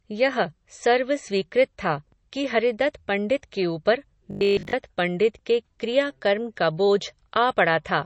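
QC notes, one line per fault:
throughout, MP3 compression: The speech has a hard ceiling in the treble, so sibilants lose their top and sound dull and clipped. Compression damage is plainly audible: weak spectral detail drops in and out between frames, giving a watery, swirling texture and smeared consonant onsets. The fixed treble cut and this degree of damage fit a low bitrate around 32 kbps, which is the likely cause.
4.31 to 4.73 s, robotic sound from repeated short buffers: Right after "हरिदत्त पण्डित के ऊपर" and before "पण्डित के क्रिया कर्म", the speech turns into a rigid metallic buzz at 50 Hz that still roughly tracks the syllables. The likely cause is that, for most of this span, incoming audio was late and a 20 ms slice was looped in its place. That repetition period imposes the 50 Hz pitch while the real material in between is skipped.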